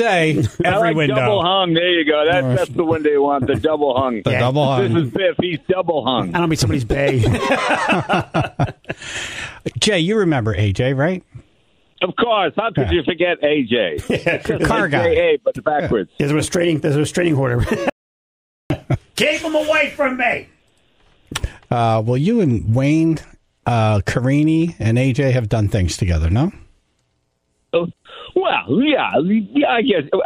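The input feeding the recorder was likely lost for a moment, through a disconnected device, a failed link or an accidental mute, while the recording carried on writing silence. The result is an audio dropout to silence from 17.90 s to 18.70 s, roughly 0.81 s long. The sound cuts off abruptly, the gap is silent with no room tone underneath, and it resumes mid-flow, so whatever occurred in that stretch is missing.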